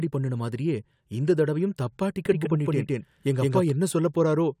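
From 2.26 to 3.71 s the speech is heard twice, a full-strength echo trailing about 150 ms behind, likely a doubled audio track from a second, slower capture path. At 2.45 to 2.47 s a brief glitch cuts in, damaged data in a compressed stream throwing the decoder off its frames.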